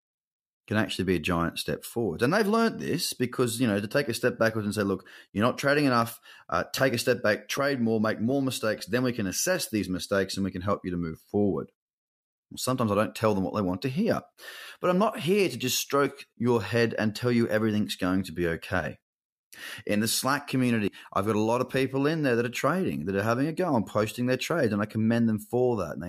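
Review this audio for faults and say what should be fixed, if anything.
There's a corrupt FLAC frame at 6.02 s: a glitch peaking around -19 dBFS. It sounds like flipped bits in the compressed data that the decoder passed through without checking the checksum, so the prediction ran on bad numbers until the next clean frame took over. A second, much fainter glitch at 8.80 s, around -37 dBFS, is the same thing on a smaller scale. Decoding with checksum verification switched on would catch both and let you re-fetch or conceal the bad frames.

Around 20.88 to 20.97 s you get compressed frames skipped. The audio jumps forward by roughly a tenth of a second, and since lossless frames don't overlap, the join comes out as a hard click rather than a smeared blip. Those frames were either missing from the file or rejected by the decoder as damaged, so that stretch of speech just isn't there. Transferring the file intact and verifying it against a hash before decoding would prevent this.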